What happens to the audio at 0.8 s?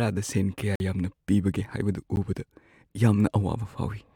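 The audio was replaced by zeros for about 46 ms, a block of digital silence from 0.755 to 0.80 s, leaving a short hole.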